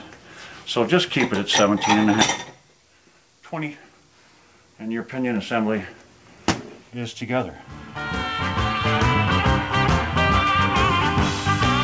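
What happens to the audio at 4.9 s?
Nothing goes wrong at 4.9 s: the audio carries on intact through the call path there, with the band stopping at 8 kHz as the call codec leaves it.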